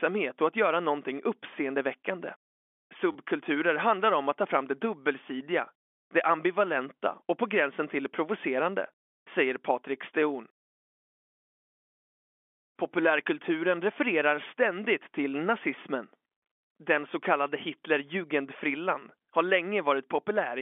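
At 3.12 to 3.15 s, packet loss with last packet repeated fills a 30 ms gap: one short stretch of sound replays, consistent with three 10 ms packets, giving a brief robotic stutter. On a waveform the identical segments tile side by side, all within the narrow telephone band of the G.711 line.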